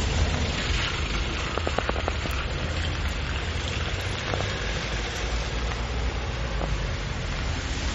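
Throughout, the sound swirls and its attacks smear, likely from bit-starved MP3 compression dropping weak frequency lines. A spectrogram shows a hard ceiling at 16.5 kHz and flickering gaps.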